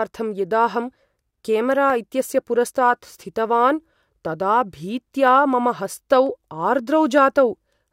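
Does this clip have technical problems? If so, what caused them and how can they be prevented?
Yes. Single sharp clicks at 1.9, 5.28, 6.27 and 7.18 s are likely dropped samples: a handful of samples vanish, so the waveform jumps abruptly. Unlike a dropout, no sound goes missing; the loss lasts a fraction of a millisecond. Prevent this with larger buffers and steady, uninterrupted capture processing.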